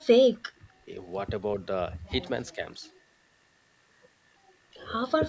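Speech with two brief dips, from 0.59 to 0.66 s and from 2.55 to 2.63 s, likely speech suppressed in double talk by an echo canceller. The first drops about 20 dB, a visible notch in the waveform and a faded band on a spectrogram; the second is a shallow dip of a few dB.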